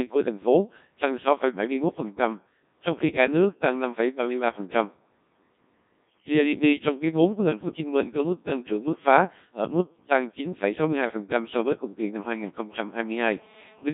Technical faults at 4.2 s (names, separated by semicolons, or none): Codec 2 vocoder